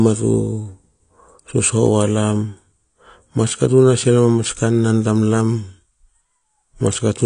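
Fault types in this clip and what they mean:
AAC compression: The speech sounds dull and smeared from start to finish, and the damage is plainly audible. Nothing is present above 9.8 kHz, so the top of the spectrum is simply missing. The likely cause is AAC-LC coding at a low bitrate, and the sound fits a rate near 32 kbps. At that rate the encoder quantises its frequency lines coarsely and gives up the high band to save bits.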